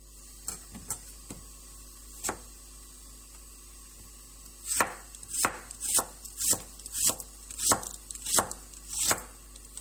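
Mains hum runs from start to end: a steady 50 Hz tone sitting only about 15 dB below the sound, with some low harmonics. On a spectrogram it is a bright unbroken horizontal line at 50 Hz, and the waveform carries a constant low ripple.

Throughout, the sound also carries layered artefacts: different codec artefacts heard together and a dull top end where the high band is cut off early. This is likely transcoding between lossy codecs, and it fits an MP3 encode followed by a low-rate Opus pass, each adding its own artefacts. A spectrogram shows a hard ceiling across the whole clip with blotchy, patchy detail beneath it.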